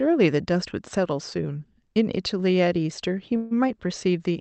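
Speech passed through a call codec whose top end stops near 8 kHz, and from 3.36 to 3.53 s a call audio freeze occurs. The sound stalls and is stretched into a fading buzz or hiss for about 145 ms, likely packets delayed long enough to drain the jitter buffer. Playback then resumes where it paused, so nothing is lost but everything after arrives later.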